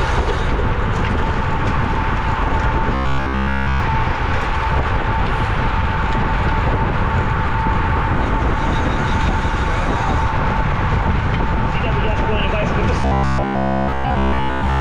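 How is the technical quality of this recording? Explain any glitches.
Two stretches turn robotic. From 2.95 to 3.80 s the sound becomes a rigid metallic buzz at 66.7 Hz, and again from 13.01 s to the end at 14.81 s. This is likely robotic sound from repeated short buffers, with roughly 15 ms of audio looped. It is looped throughout the first stretch and for most of the second.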